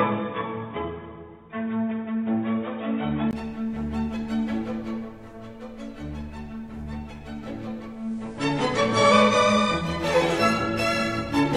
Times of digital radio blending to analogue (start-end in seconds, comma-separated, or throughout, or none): 7.88-10.06